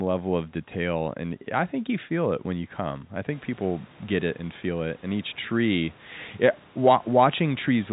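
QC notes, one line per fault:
No faults found in this speech recording.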